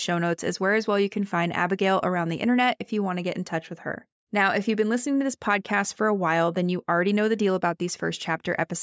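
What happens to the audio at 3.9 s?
Nothing goes wrong at 3.9 s; the speech carries on intact through that moment with no dropout, glitch or other fault.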